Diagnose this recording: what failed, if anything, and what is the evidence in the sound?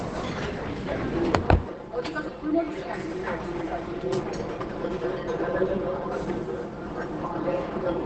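Codec stage: throughout, the sound is muffled and hoarse, with a spectrogram showing nothing above 8.8 kHz, likely Opus compression in speech mode, fitting roughly 16 kbps wideband.

Playback or mixing stage: from 1.70 s to the end, channel delay (comb filtering) makes the sound hollow. A copy around 5 ms late, summed to mono, carves evenly spaced notches from about 100 Hz, visible as fixed horizontal stripes.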